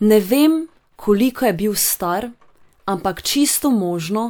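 No technical faults are audible.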